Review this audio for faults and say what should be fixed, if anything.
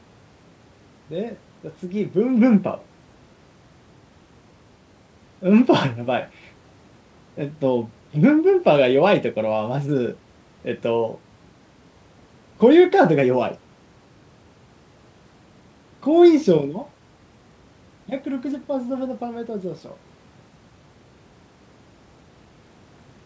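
Nothing in this audio needs fixing; there are no faults to review.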